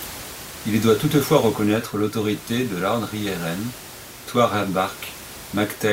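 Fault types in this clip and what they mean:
No fault types appear in this clip, so there are none whose meaning needs explaining.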